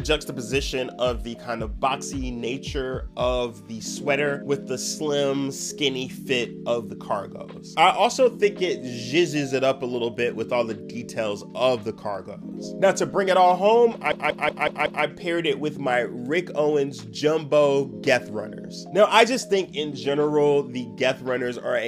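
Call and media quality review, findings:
System hang loop, 14.12–15.05 s: host or audio driver stalled while the output hardware kept replaying its ring buffer. A 186 ms slice repeats five times at 5.38 Hz, a machine-gun stutter, which fits an 8192-sample buffer. Essentially no audio lost.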